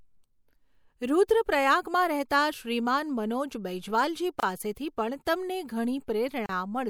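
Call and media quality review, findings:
Gap at a join of encoded pieces, 4.40 s and 6.46 s. Speech breaks for a 28 ms gap, then 32 ms. Edges smeared by the codec. Speech resumes where it stopped. Probable component: segment concatenation after encoding. Pieces encoded separately, joined untrimmed. Encoder start delay and last-frame padding left in place.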